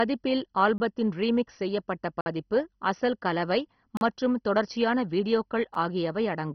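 From the start the speech has the dull, gurgling, granular quality of heavy MP2 compression, likely from a low-bitrate encode consistent with about 32 kbps. The upper sub-bands have been switched off, leaving nothing above 6.1 kHz, and the coarse quantisation of the remaining bands makes the speech flicker and churn.

Then come four blocks of digital silence, each a sudden cut to silence and back with no fade, probably from the output buffer not being filled in time. The first, at 0.78 s, is a 20 ms hole just before "ரீமிக்ஸ் செய்யப்பட்ட பதிப்பு அசல்". At 2.21 to 2.26 s, between "ரீமிக்ஸ் செய்யப்பட்ட" and "பதிப்பு அசல் கலவை மற்றும்", a 51 ms gap. At 3.97 to 4.01 s, 40 ms before "மற்றும் தொடர்ச்சியான". At 5.74 s a 7 ms drop-out that comes across as a tick.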